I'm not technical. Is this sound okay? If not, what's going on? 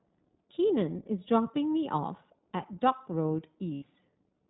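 No. All the way through, the speech sounds muffled and slightly rough and robotic, like a cheap internet phone call. That's the iLBC codec, a compression method built for voice calls. It keeps only the lower part of the sound, nothing above 4 kHz, so crisp, airy detail is gone. It also rebuilds the voice from a simplified model in 20 ms chunks, which gives it that synthetic edge.

At about 3.74 s there is a short glitch lasting roughly a tenth of a second, until about 3.84 s. The voice turns into a brief held, buzzy hum instead of continuing normally. That is lost iLBC frames: some of the data never arrived, and the decoder filled the hole by repeating the last bit of voice mixed with noise. The 80 ms gap fits about four missing chunks. Normal sound returns straight afterwards.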